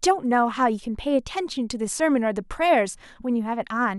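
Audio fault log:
Nothing wrong turns up anywhere in this bit of speech, so there's nothing to log here.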